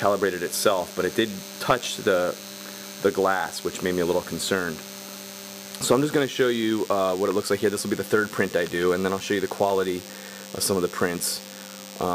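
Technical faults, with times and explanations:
Throughout: DECT cordless phone buzz, a thin, harmonic-rich 100 Hz buzz from a nearby DECT unit's 10 ms radio bursts being rectified, roughly 15 dB down.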